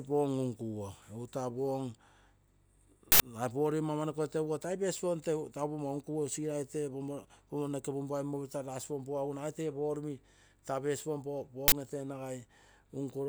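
Uninitialised buffer at 3.12 to 3.20 s and again at 11.68 to 11.72 s: blocks of 80 ms and then 40 ms were played out before any speech had been written into them, so leftover memory was read as samples, giving short, loud cracks or bursts of digital noise.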